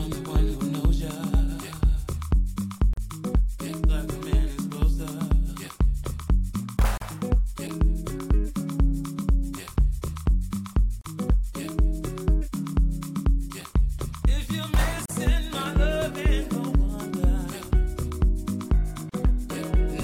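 The audio has a gap at a join of encoded pieces, a brief dropout of about 40 ms at 2.93, 6.97, 11.01, 15.06 and 19.10 s, recurring every 4 s. Each piece was encoded on its own and joined untrimmed, so encoder start delay and last-frame padding stay in, and the sound then resumes where it stopped. A waveform shows near-silent notches with smeared edges; a spectrogram shows thin vertical blank stripes.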